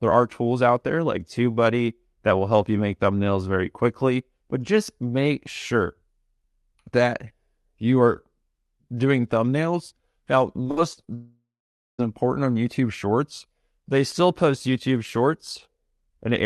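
From 10.63 to 11.09 s the speech turns choppy: repeated packet loss (robotic sound). Five short holes, the longest 60 ms, are each filled by stretching the last sound, about a third of the span, and the voice keeps returning between them.

From 11.15 to 12.00 s comes a single long hole, likely a long network dropout. Unlike the brief patched gaps before it, the concealed sound fades out and about 0.5 s of silence follows before audio resumes at "important on", with that stretch simply lost.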